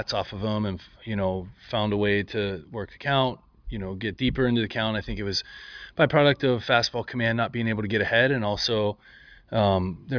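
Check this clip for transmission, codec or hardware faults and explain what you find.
Nothing audible points to a transmission, codec or hardware problem anywhere in the clip.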